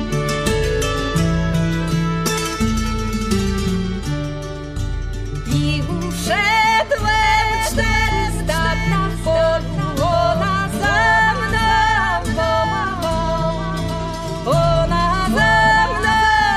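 At 7.23 s a doubled audio track begins and runs to the end: a second full-band copy of the sound trails the original by about a second, somewhat quieter, with no decay or room colour. It starts abruptly, most likely from a second, slower capture path being mixed in.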